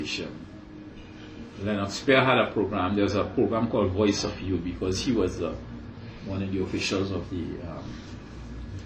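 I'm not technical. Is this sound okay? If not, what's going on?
Yes, nothing wrong here.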